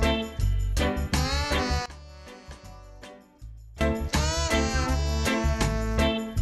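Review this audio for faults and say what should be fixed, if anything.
Sudden gain jump from 1.86 to 3.81 s: sound and background both drop abruptly by about 19 dB, then snap back, likely a gain change applied without a ramp. Prevent it by smoothing every gain change over a few milliseconds.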